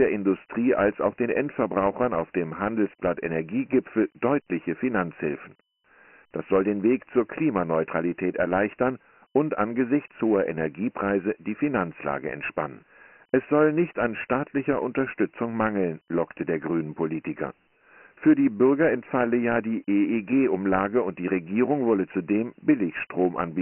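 From the first second to the end, the speech carries Dialogic VOX ADPCM damage, and it's heavy. There's nothing above 3 kHz, which fits 4-bit OKI ADPCM at 6,000 samples a second, roughly 24 kbps, sitting inside a phone-line band of about 200 Hz to 3.6 kHz. With only four bits per step, the coder keeps missing the waveform, so a gritty hiss rides along behind the speech wherever it's active.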